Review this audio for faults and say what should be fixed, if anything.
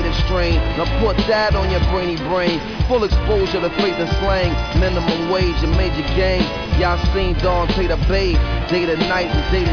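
No faults; nothing to fix.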